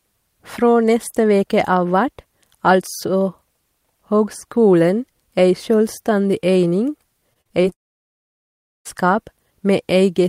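From 7.33 to 7.73 s the speech turns choppy: repeated packet loss (robotic sound). Several short holes, the longest 40 ms, are each patched by stretching the preceding sound, so roughly a third of this span is concealment rather than real audio.

At 7.73 s a long network dropout is the likely cause of what follows. Instead of brief patched holes, the last sound smears briefly and then nearly everything falls silent for about 1.1 s. The speech resumes at 8.87 s with that stretch simply gone.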